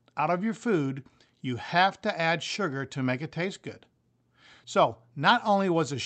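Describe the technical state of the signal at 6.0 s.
At 6.0 s the speech is intact, passing through the WebRTC call path with its ordinary codec coloration and a top end that stops around 8 kHz.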